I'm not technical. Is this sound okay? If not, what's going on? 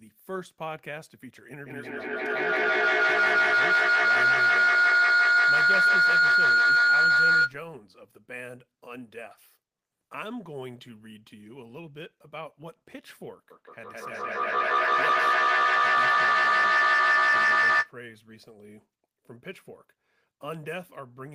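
No. Two devices in the same room were on one call, so each picked up the other's loudspeaker and the sound looped round, getting louder each time. That feedback howl becomes a shrill whistle from 1.66 to 7.6 seconds and again from 13.51 to 17.97 seconds.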